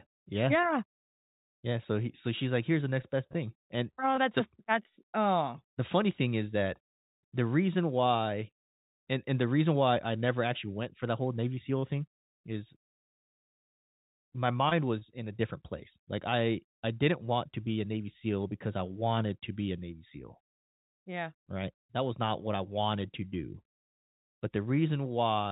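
Scattered short gaps at 3.02–4.19 s (after "she's like here's the"), 11.55–13.63 s and 14.69–15.40 s: lost packets, each hole no longer than about 30 ms, are patched by stretching the preceding sound, leaving brief ticks and smears. They differ from one long dropout in being several tiny hiccups spread across each stretch. The call path's narrowband G.711 coding, with nothing above 4 kHz, is heard throughout.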